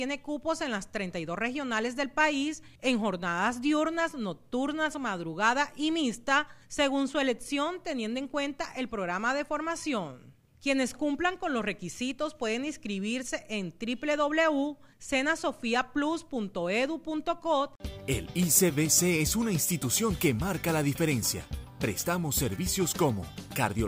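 Nothing stood out as a technical problem on listening to the recording.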